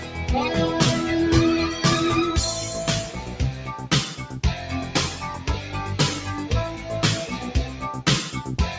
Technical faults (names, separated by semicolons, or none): noise suppressor applied to music or sounds; sound cut by the noise suppressor